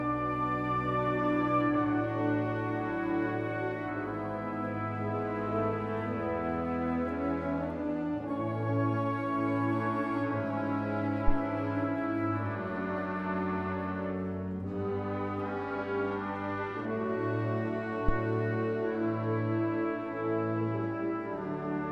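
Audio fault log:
18.09–18.21 s: phantom power thump. A deep, low thump breaks in suddenly. It peaks at about -14 dBFS and dies away within roughly 29 ms. A supply switched on or off on a live input sent a voltage step through the coupling capacitors.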